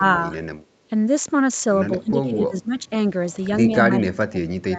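Speech that gets pulled down in three spots, at 0.0 to 0.04 s, 2.0 to 2.9 s and 3.9 s to the end, dipping by up to about 25 dB, likely speech suppressed in double talk by the echo canceller.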